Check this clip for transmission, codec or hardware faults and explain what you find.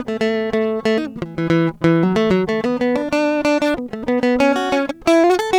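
One hardware fault runs through the whole music clip: sample clock jitter.

Throughout, the converter's clock wanders by roughly a microsecond, so each sample lands slightly early or late. That timing error turns into amplitude error in proportion to how steeply the waveform is changing, leaving a grainy hiss about 45 dB below the music that swells on loud, bright passages and vanishes in pauses. A spectrogram shows a faint broadband haze tracking the treble energy; the waveform looks clean.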